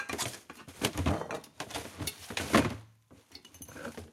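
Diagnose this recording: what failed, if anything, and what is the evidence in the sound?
Nothing in the recording points to a failure at any stage of the chain. The everyday sounds in it give no audible evidence of trouble from the capture end through to playback.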